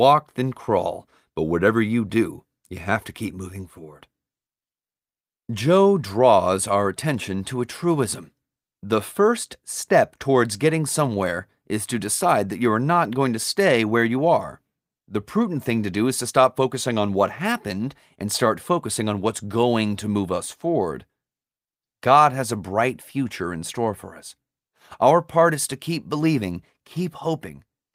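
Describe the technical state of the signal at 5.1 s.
At 5.1 s the speech signal is intact, with no technical fault audible at that moment.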